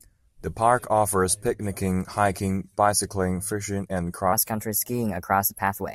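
From 4.33 s, right after "hiking bicycling fishing and", the speech runs to the end as a section at the wrong speed: about 1.19 times too fast, so it sounds hurried and raised by about three semitones, likely from playback against a mismatched clock.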